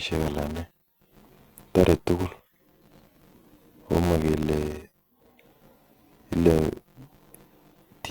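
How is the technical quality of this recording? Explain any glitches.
The quality is poor because of one continuous fault. A filter restarted on every block runs through the whole clip. Each block begins from silence, producing a tiny transient. These repeat at 172 Hz, which fits a 256-sample block. The result is a steady buzz that rises and falls with the speech level.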